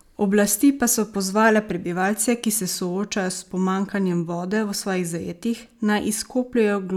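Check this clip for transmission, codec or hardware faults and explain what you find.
I hear no faults anywhere in this speech recording.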